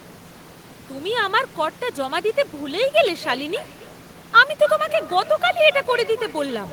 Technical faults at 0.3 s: none

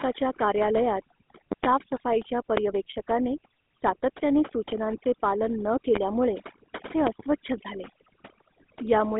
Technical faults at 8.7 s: overdone noise removal; GSM full-rate codec

